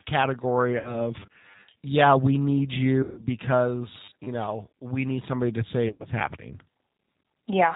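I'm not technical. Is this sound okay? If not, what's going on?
No. G.729 codec, throughout: the speech is squeezed into a narrow, telephone-like range and rebuilt by a simple model, so it sounds rough and slightly robotic.

VoIP packet loss concealed by the speech codec, at 0.79 to 0.97 s, 3.03 to 3.24 s, and 5.88 to 6.07 s: pieces of the call went missing, so the phone guessed by stretching the last sound into a fading buzz or hiss. The gaps were about 60, 140 and 120 milliseconds, and the last one was broken into separate bits.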